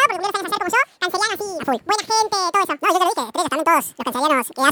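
Throughout, the audio is read two samples at a time, so it plays at double speed and an octave (12 semitones) high.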